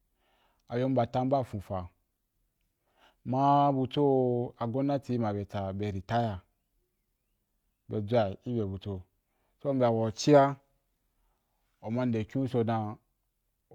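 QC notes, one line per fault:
Nothing stood out on listening to this speech recording.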